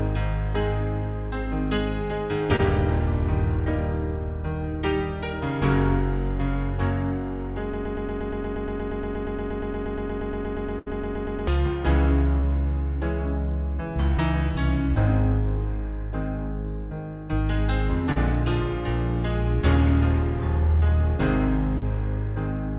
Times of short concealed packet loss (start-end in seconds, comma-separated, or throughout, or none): 2.56-2.61, 12.40-12.44, 18.12-18.18, 20.80-20.84, 21.78-21.84